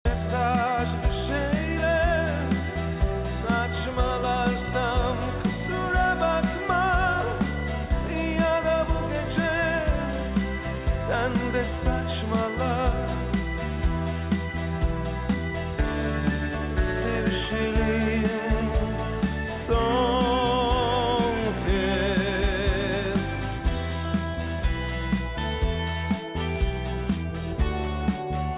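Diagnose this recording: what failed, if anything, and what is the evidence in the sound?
Nothing failed, and there is no evidence in the sound of any fault at any stage.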